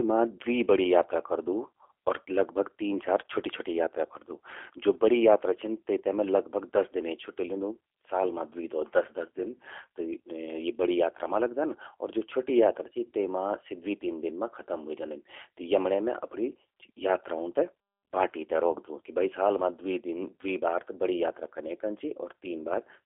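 From start to finish the speech carries G.729 codec damage, and it's plainly audible. The band is squeezed to roughly 300 Hz to 3.4 kHz, so it sounds thin and phone-like, and the sound has that slightly rough, synthetic edge you get when the codec rebuilds each 10 ms frame from a vocal tract model, a pitch predictor and a handful of pulses. It fits an 8 kbit/s G.729A stream.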